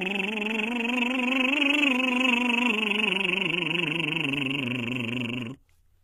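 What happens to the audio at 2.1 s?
At 2.1 s the music carries HE-AAC compression, likely at around 20 kbps, running through the whole clip. The treble is rebuilt by copying lower bands upward, so it sounds bright yet gritty and metallic, cut off above 14.1 kHz, rather than simply dull.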